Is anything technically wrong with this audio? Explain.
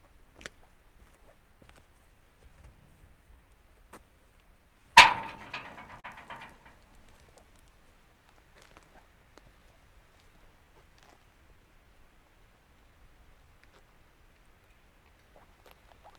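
Yes. There is clock drift between sender and receiver throughout: the sender's clock runs about 2 percent slow, so the receiver's jitter buffer keeps draining and must be refilled. Small timing hiccups recur all through the clip at uneven intervals.

Repeated timing corrections run from 0.20 to 4.81 s and again from 7.06 to 15.75 s. Playback is effectively at 98 percent speed as the receiver repeats short pieces to cover the slow sender, adding about a tenth of a second, then about a fifth. Each edit is small, and the edits are unevenly spaced.

A short stall from a late packet occurs at 6.00 to 6.06 s. A packet arrived late, the buffer ran empty, and the receiver held the last sound for 36 ms until it came. Nothing is lost, but the sound is briefly prolonged with a slight buzz or dip.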